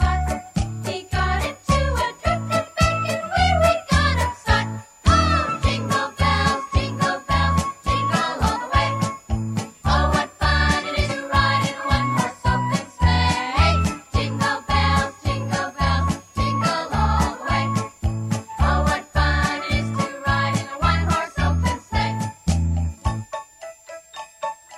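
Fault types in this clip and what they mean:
Switching supply whistle: A faint high whistle sits under the whole clip, wandering between roughly 6.5 and 7.5 kHz around a centre near 7 kHz. It's sitting around 30 dB below the main sound. That's a switching power supply nearby running in an audible burst mode or beating against another supply, and the pitch drifts as its load changes.
Compressed frames skipped: The sound jumps ahead twice, at about 8.43 to 8.47 s and again at about 11.08 to 11.11 s, losing roughly a fifth of a second each time. Whole blocks of compressed audio never got played, either because they were missing from the file or because the decoder threw them out as damaged. The size of the jumps fits four or five frames of about 46.4 ms each.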